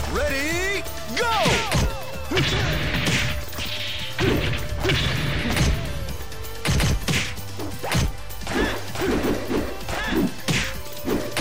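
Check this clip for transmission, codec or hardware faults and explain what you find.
No transmission, codec or hardware faults turn up anywhere in this clip.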